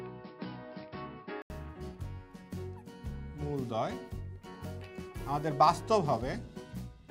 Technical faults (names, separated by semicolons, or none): input switched to a poorer device